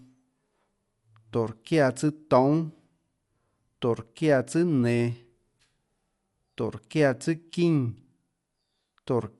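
A speech recording, about 9 s long, carries audible codec damage from start to finish. The sound is dull, with a rough, fluttering noise clinging to voiced tones, and nothing survives above 11.4 kHz. The likely cause is Dolby Digital compression at a low rate, which fits roughly 64 kbps: the encoder narrowed the band and left many frequency lines without mantissa bits, so dither noise fills them. A spectrogram would show a hard ceiling at 11.4 kHz and grainy, speckled noise around the harmonics.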